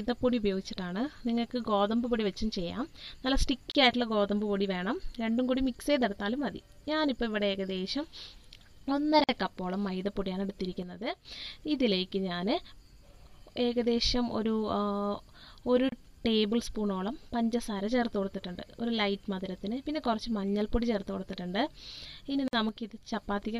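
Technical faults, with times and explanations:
3.71, 9.24, 15.89 and 22.48 s: gap at a join of encoded pieces. Brief silences of about 35, 49, 30 and 52 ms cut into continuous sound, and the sound then resumes exactly where it stopped. The pieces were encoded separately and joined untrimmed, so each one's start-up delay and padded final frame remain as dead air. Unlike a dropout, nothing is skipped, and the edges are softened by the codec.
10.83–11.25 s and 22.69–23.12 s: one channel drops out. For about 0.43 s each time the sound stays present but abruptly drops by about 6 dB until full level snaps back. The likely cause is one stereo channel going missing before a mono sum, which halves the shared content. Unlike the join gaps, there is no silence.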